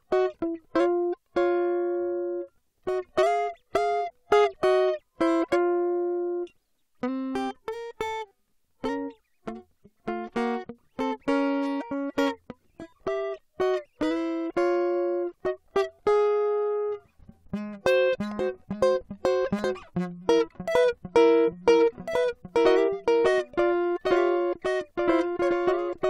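From 21.48 s to the end, the music picks up a doubled audio track: a second full-band copy trailing about a second and a half behind, roughly 5 dB quieter, cutting in abruptly with no decay or room colour. Likely a second, slower capture path mixed in.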